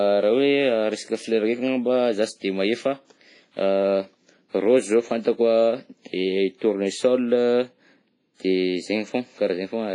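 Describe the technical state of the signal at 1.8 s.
At 1.8 s the speech carries heavy damage from WMA compression, likely the cause, and it runs through the whole clip rather than just this moment. Nothing reaches above 10.4 kHz, so the top end is cut off. Coarse quantisation in long transform blocks smears noise over tens of milliseconds and drops weak spectral detail. The result rings and sounds washy, with a hiss that swells and fades with the signal. That fits a bitrate near 24 kbps.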